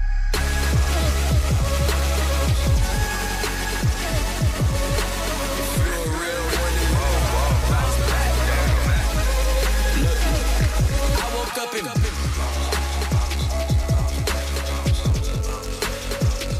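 From start to finish, the audio carries a doubled audio track, likely because the signal reached the mix twice, once directly and once through a slower path or a misaligned edit. The second copy trails by roughly a third of a second and sits about 5 dB below the first. It is full-band and dry, with no decay or room colour, so every sound is followed by a distinct, flat repeat rather than a natural reflection.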